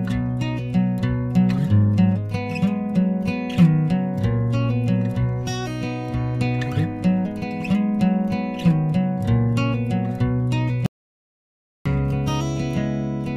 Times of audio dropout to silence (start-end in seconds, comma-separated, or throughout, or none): 10.86-11.86